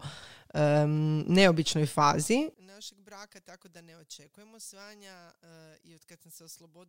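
From 2.54 s, just after "neobičnoj fazi", to the end of the clip, one channel appears inverted: its polarity is likely reversed somewhere in the stereo path, so the material common to left and right cancels when the two are summed to mono. The centred speech drops by about 26 dB, leaving only the faint residue of whatever differs between the channels, a faint copy of the voice.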